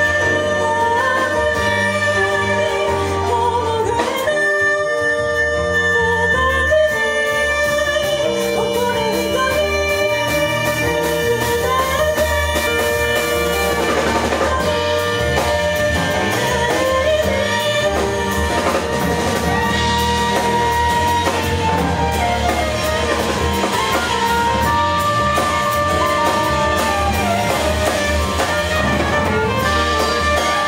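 A jump in the audio at 8.55 s, and another at 12.66 s, each with the sound jumping ahead: compressed frames skipped. The decoder lost or rejected whole 23.2 ms frames, skipping roughly 50 ms and then roughly 150 ms of audio.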